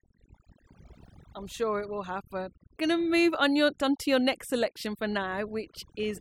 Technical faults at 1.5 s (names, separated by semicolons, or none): overdone noise removal